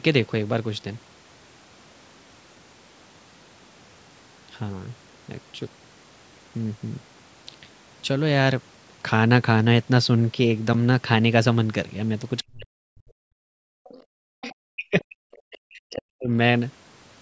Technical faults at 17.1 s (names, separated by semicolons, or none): none